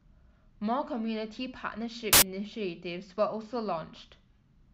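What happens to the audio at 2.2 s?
Right around there, from 2.13 to 2.22 s, the speech gets replaced by a short burst of loud, harsh broadband noise. That's samples built from the wrong bytes: the bytes are misassembled, so the jittery low bits end up dominating every value for those 90 ms or so.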